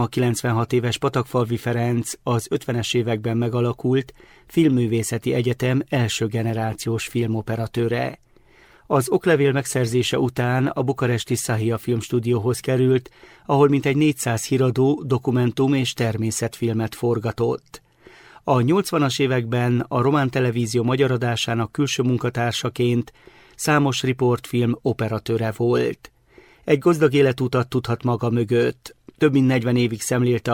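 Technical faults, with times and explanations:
6.5 to 13.49 s, call bitrate drop. The sound turns coarse and muffled, losing its high frequencies. This fits a fall from about 96 kbps to 20 kbps after the bandwidth estimate dropped. The worst stretch lasts 5.18 s, then clarity returns.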